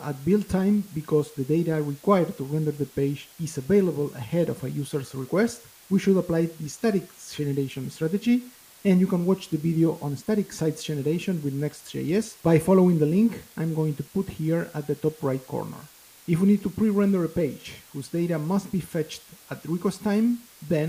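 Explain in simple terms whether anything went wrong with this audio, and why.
Something did go wrong, and it's there from the very first moment to the last: a steady, even hiss sits under everything, and it's fairly loud next to the sound itself. That's low bit depth with dither. The audio was stored with only about 7 bits, far too few, so each value got rounded coarsely. A little random noise was mixed in before rounding, which turns the harsh rounding errors into smooth, constant hiss rather than crunchy distortion.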